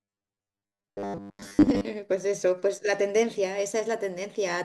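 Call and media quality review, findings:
Robotic sound from repeated short buffers, 0.01 to 1.87 s. Speech turns into a stiff metallic buzz pinned at 100 Hz, loosely following the words. Likely a starved playout buffer looping its last 10 ms chunk, skipping most of the real audio.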